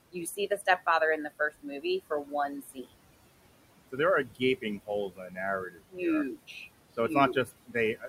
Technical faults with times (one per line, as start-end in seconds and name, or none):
0.00-8.08 noise suppressor artifacts
0.12-0.87 speech cut by the noise suppressor
1.39-2.93 speech cut by the noise suppressor
3.92-5.38 speech cut by the noise suppressor
5.69-5.99 speech cut by the noise suppressor
6.36-6.56 speech cut by the noise suppressor
6.97-8.08 speech cut by the noise suppressor